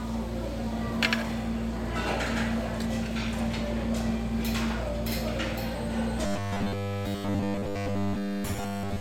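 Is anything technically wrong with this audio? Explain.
Yes. From 6.26 s to 9.00 s, there is robotic sound from repeated short buffers. A 10 ms slice is likely looped throughout, forcing a rigid, metallic 100 Hz buzz.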